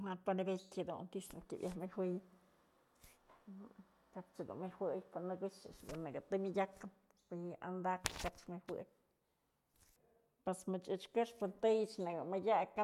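No technical faults can be heard anywhere in the recording.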